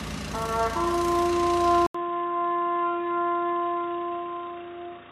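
At 1.87 s the audio cuts out for about 80 ms, then returns duller, boxier and around 10 dB quieter, staying that way to the end. This is likely an input switched to a poorer device, which passes a narrower band. On a spectrogram everything above 3.8 kHz disappears at that point, leaving a flat ceiling, and a new faint noise floor appears. On the waveform, a brief flat gap is followed by a visibly smaller envelope.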